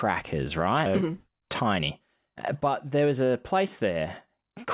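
A skip ahead at 0.86 to 0.88 s drops roughly 0.7 s of speech while later audio waited, joining the two sides with no gap. A jitter buffer speed-up from 1.02 to 2.35 s trims pitch periods repeatedly, removing about a tenth of a second. The speech runs 106% fast at unchanged pitch, over a band ending at 4 kHz that fits G.711 mu-law.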